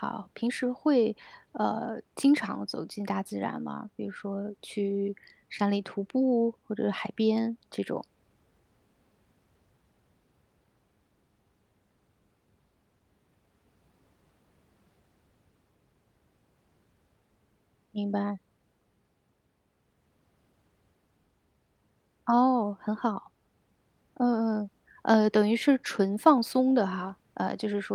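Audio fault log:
No audible faults found.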